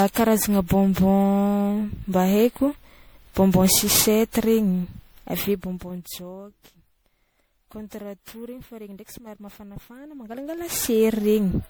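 From the start, the speech has that swirly, hollow quality of generation loss: consonant attacks blur and the spectrum sounds chewed, worse than a single pass at this quality would leave it. It's likely been through an MP3 encode and decode around ten times, which fits a 96 kbit/s chain. Each pass quantises on a shifted frame grid, so the artefacts pile up. There's nothing above 20.8 kHz.

Then from 5.28 to 6.28 s you get zipper noise. The level drops by roughly 20 dB over that second, but it moves in 1 dB steps, around thirty a second, with no smoothing between them. Every jump puts a tiny click into the waveform, so a fine ticking, zipping texture rides on the speech for as long as the fade lasts.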